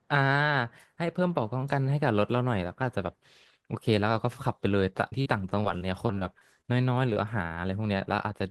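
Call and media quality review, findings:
Repeated packet loss (robotic sound), 5.09–6.66 s: choppy speech with pieces missing. Jitter buffer and packet-loss concealment. 11 gaps, longest 37 ms, about 16% of the span synthesized and 200 ms of audio lost. Unlike isolated losses, holes recur before recovery.

Short concealed packet loss, 7.14–7.18 s: brief smear or wobble. Decoder concealment extrapolated the last sound for 19 ms, so 20 ms of real audio is gone. It is a single event, not a cluster.

Short concealed packet loss, 7.97–8.01 s: same signature, 20 ms filled and 20 ms lost, with a possible dropped consonant. It differs from a stall because content is missing, not delayed.

Short stall from a late packet, 7.48–7.52 s: a sound held slightly too long, with a faint buzz. The jitter buffer underran, stretching the last sound 24 ms until the packet arrived. Nothing is lost, and playback resumes where it stopped, adding a 24 ms delay shift. 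Unlike concealed loss, no sound disappears.

The Opus call path carries audio up to about 12 kHz, consistent with around 20 kbps.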